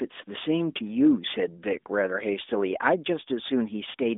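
Nothing stood out on listening to this speech, which arrives through an AMR narrowband mobile codec path with its telephone-like band of roughly 250 Hz to 3.6 kHz.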